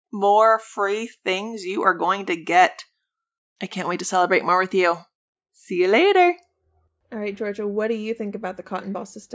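Nothing goes wrong anywhere in this speech recording, so there's no technical fault to walk through.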